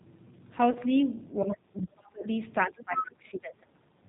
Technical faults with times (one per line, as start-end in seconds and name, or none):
0.00-4.08 G.729 codec
0.71-0.78 VoIP packet loss concealed by the speech codec
1.43-2.25 speech suppressed in double talk
2.67-3.67 speech suppressed in double talk
2.79-3.05 other side's voice leaking through
3.95-4.01 background gated by the echo canceller